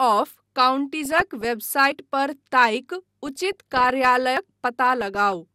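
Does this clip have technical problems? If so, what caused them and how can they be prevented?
Yes. DAB burbling: weak reception let bit errors, under one percent, slip past error correction into the MP2 data, corrupting samples and scale factors so single sub-bands jump in level frame by frame. Burbling is heard from 1.01 to 1.45 s, 3.26 to 4.17 s and 4.83 to 5.33 s. A better antenna position or stronger multiplex prevents this.

Audio missing between chunks: likely a recorder working in 2.5 s chunks dropped a short piece at each handover and butted the sides together. Skips of about a twentieth of a second are heard at 1.92 s and 4.37 s. Buffering across chunk boundaries prevents this.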